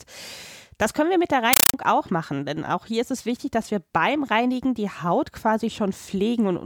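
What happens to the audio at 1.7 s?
Loud, chattering static replaces the speech from 1.53 to 1.74 s: a compressed stream played as audio, with 8 ms noise bursts about 31 times a second, which fits an undecoded AC-3 stream.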